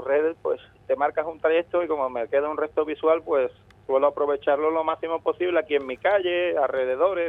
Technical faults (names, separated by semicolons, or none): none